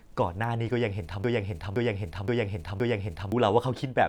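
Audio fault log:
1.24–3.32 s, broken-record loop: a 0.52 s slice of speech plays four times back to back, identical each pass, so the flow just sticks, and whatever should have come in those two seconds is gone. Likely a stalled player or stream resending its last buffered chunk.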